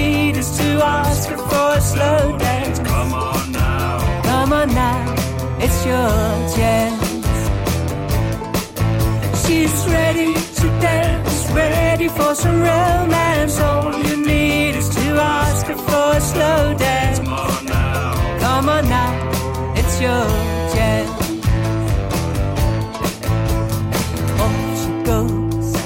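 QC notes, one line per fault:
17.22 s, audio missing between chunks: the sound jumps forward abruptly. Roughly a third of a second is gone, and the two sides are butted together with no gap. This is likely a chunked recorder losing material while closing one 10-second block and opening the next.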